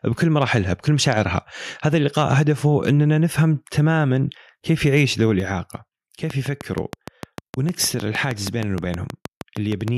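At 5.4 s the speech and the background both drop in level at once, by about 6 dB. This is a microphone volume stepped down. The likely cause is the call software judging the input too hot and cutting the device's input volume in a single move. There is no fade. The level simply steps lower and stays there. The speech sounds suddenly farther away and quieter, and the room noise falls with it.

From 6.30 s to 9.89 s a train of clicks runs over the audio. The clicks arrive at a steady pace, about 6.4 per second, so around twenty in all. Each has much the same sharp shape. They stand well above the speech, and they carry on through the pauses too. The likely source is interference from nearby equipment or a faulty connection or power supply. It is heard as a regular ticking laid on top of the talker.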